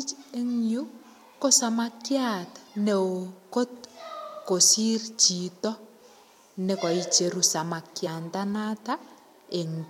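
At 5.64 s and again from 8.06 to 8.08 s, compressed frames are skipped: the decoder drops damaged or missing frames, so the speech jumps ahead, first by a few milliseconds, then by roughly 50 ms.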